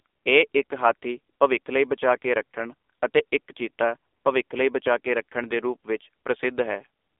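Speech passes through the AMR narrowband mobile codec throughout. Only 300 Hz to 3.6 kHz survives, and the buzzy, synthetic voicing fits a low mode near 7.4 kbps. A spectrogram shows a flat ceiling at 3.6 kHz and almost nothing below 300 Hz.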